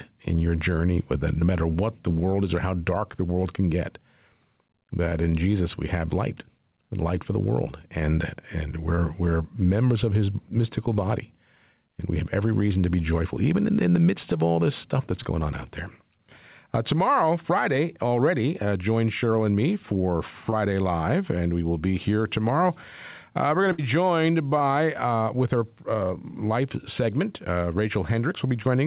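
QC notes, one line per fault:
Throughout: gain pumping. The input gain was likely set far too high for the microphone, so a fast limiter keeps pulling the level down on every loud syllable and releasing it in the pauses. The gain swings by around 10 dB. Loud and quiet passages sit unnaturally close together, giving a squashed, breathing quality across the whole speech clip.
1.40, 5.09, 8.95, 15.23, 20.50 and 24.58 s: short concealed packet loss. At each point about 20 ms of the call failed to reach the decoder in time, and the receiver covered the hole by extending the preceding sound for 10 to 20 ms before rejoining the real signal. Each one is heard as a brief smear or wobble. They fall just before "we're members of his", between "all this stuff that's" and "on out there", and right after "and me for". The band stops at 4 kHz, which fits a narrowband 64 kbps G.711 path.
23.72 to 23.80 s: burst of packet loss. 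A run of packets totalling about 60 ms was lost or arrived too late to play. The receiver stretched the last sound across the gap and faded it as the gap went on, which produces a short held buzz or dying hiss. The speech then resumes further along, so that 60 ms stretch is gone rather than delayed.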